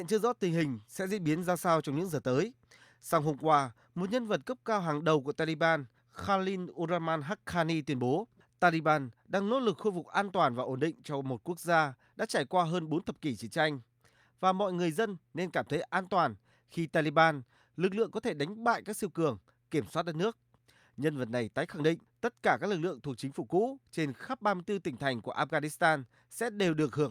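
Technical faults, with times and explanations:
Nothing technical stands out here; the recording runs along without any glitch worth flagging.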